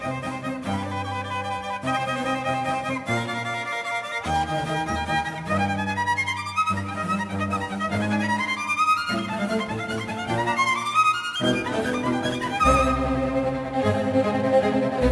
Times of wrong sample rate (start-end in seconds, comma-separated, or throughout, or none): none